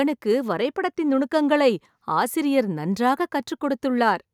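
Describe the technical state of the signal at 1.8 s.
At 1.8 s the signal is intact, with no dropout, distortion, glitch or other fault to be heard.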